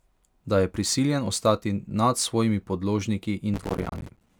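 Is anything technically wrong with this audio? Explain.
Yes. From 3.54 to 4.29 s there is processor overload crackle: the processor repeatedly fails to finish its short audio buffers, each around 5 ms, and dozens of missed deadlines each drop a sliver of silence, so the speech turns gritty and torn.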